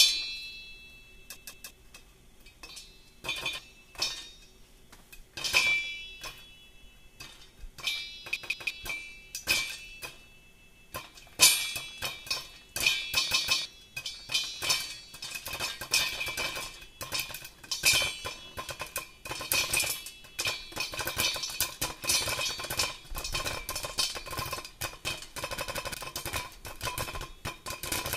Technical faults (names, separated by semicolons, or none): repeated buffer